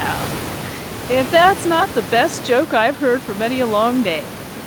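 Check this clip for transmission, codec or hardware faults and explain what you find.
Nothing here points to a transmission, codec or hardware problem; the only thing underneath the speech is some ordinary room noise from where the microphone sat, sitting about 14 dB below the talking, and that belongs to the recording rather than the system.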